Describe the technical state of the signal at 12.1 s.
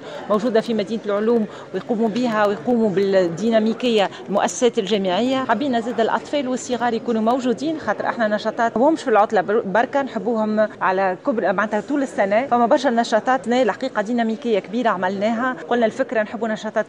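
At 12.1 s the signal is intact, with no dropout, distortion, glitch or other audible fault at that point.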